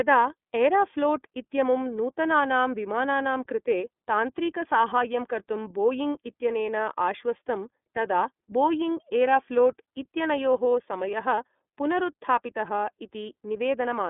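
Throughout the speech, the sound is thin, band-limited and slightly rough and synthetic, with nothing above 3.8 kHz. That is the iLBC codec: each frame is coded on its own, which fits 30 ms frames at 13.33 kbps, through a 200 Hz to 3.6 kHz telephone band.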